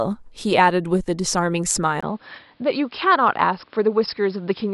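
At 2.01 s the speech cuts out for about 20 ms, then returns duller and slightly quieter, with nothing above 5.3 kHz and a faint new background noise until the end. The likely cause is an input switched to a poorer, narrower-band device.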